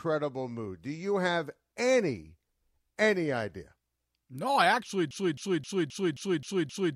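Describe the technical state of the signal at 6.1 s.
A broken-record loop runs from 5.11 s to the end of the clip, so at 6.1 s it is in progress. A 264 ms fragment of speech repeats exactly, back to back, seven times, likely because the player or stream stalled and kept resending its last held fragment. The speech that belonged there is lost.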